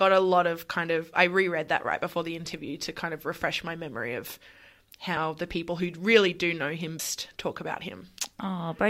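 Speech with compressed frames skipped twice: at 5.17 s the decoder lost about 30 ms, which fits a single missing or rejected 32 ms frame, and at 6.99 s roughly 150 ms went missing, consistent with about five frames in a row. At each point the audio jumps forward by the length of the missing frames.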